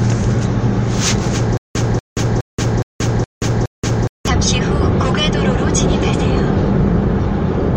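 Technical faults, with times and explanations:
1.57 to 4.28 s, stutter with silent gaps: a roughly 239 ms fragment of sound repeats six times, each followed by about 178 ms of dead silence, so it pulses every 417 ms. Likely the playback stalled, replaying its last chunk on each retry while the real audio was lost.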